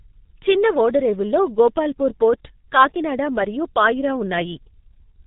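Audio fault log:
throughout G.723.1 codec: the speech is muffled and hoarse, with nothing above 3.8 kHz and consonants smeared into one another. Heavy damage like this fits a bitrate near 6 kbit/s. The codec models the voice in long 30 ms frames and updates that model slowly, so quick changes blur. A plain low-pass filter or clean telephone band would cut the top but keep consonants crisp. Here the buzzy roughness and smearing point to a low-rate speech codec.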